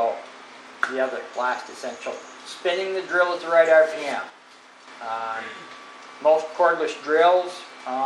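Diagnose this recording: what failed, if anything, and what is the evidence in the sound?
From 4.30 to 4.88 s the level steps down about 6 dB, tone unchanged; likely one channel drops out in the analogue wiring, unlike a gradual fade.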